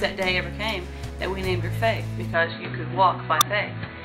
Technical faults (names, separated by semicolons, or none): input switched to a poorer device; corrupt FLAC frame